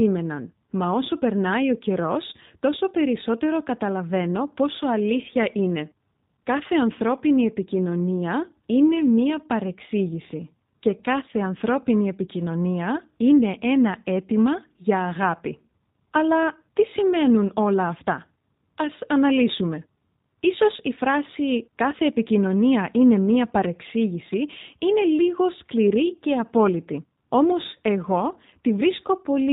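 Throughout the speech, G.729 codec damage is plainly audible. Each frame is rebuilt from a vocal tract filter, a pitch predictor and sparse pulses, which leaves a rough, slightly synthetic buzz. A spectrogram shows a hard ceiling at 4 kHz, consistent with 8 kbit/s G.729A coding.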